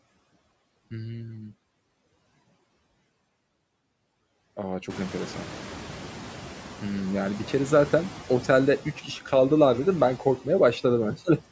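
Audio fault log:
throughout, noise suppressor artifacts: the suppressor cuts bands it treats as steady noise by about 15 dB each frame, so background sinks between phrases and returns beneath speech, more noticeably after room noise rises near 5 s.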